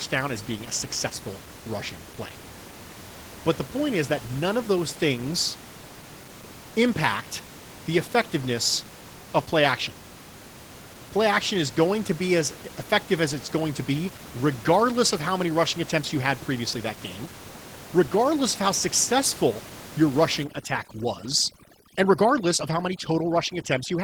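Opus voice compression runs through the whole clip. The coder models the lower band with linear prediction and adds a transform layer above 8 kHz, and at this rate both get few bits. Coarse excitation coding makes the speech plainly hoarse, muffled and a little robotic. The sound fits a bitrate around 16 kbps with 20 ms frames, and the room noise, about 17 dB under the speech, picks up a burbling texture.

Overdone noise removal sets in at 20.43 s, right after "of how successful your", and lasts to 24.04 s. The suppressor drives frequency bands it judges close to the noise floor nearly to silence, and it takes the softer parts of the speech with them. The background drops away into hush dotted with twinkling specks.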